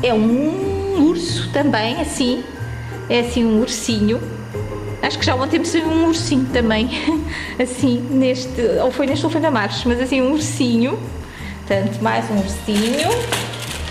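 Timecode bleed runs throughout: a chirping warble roughly 25 dB below the audio, pointing to 24 fps code, showing as stripes near 1 and 2 kHz.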